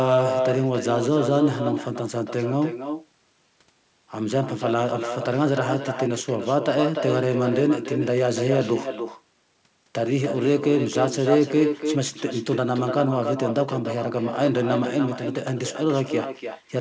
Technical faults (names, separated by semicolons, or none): echo with no canceller